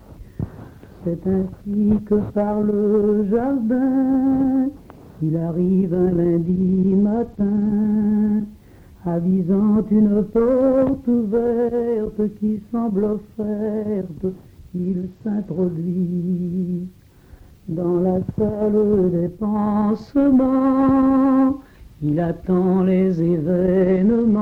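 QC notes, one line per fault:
6.45–7.69 s, 14.83–15.64 s and 23.82 s to the end: Bluetooth SBC bit pool drop, three times. The link seems to choke, so the encoder starves the top sub-bands and quantises the rest coarsely. The treble goes dull and gritty, which fits a drop from bit pool 31 to around 13 (roughly 94 kbps), before clearing after the first two.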